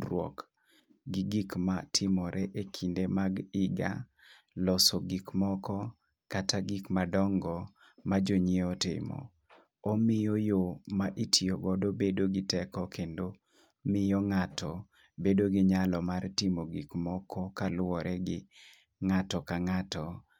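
No technical fault can be heard anywhere in the recording; the signal stays steady and intact throughout.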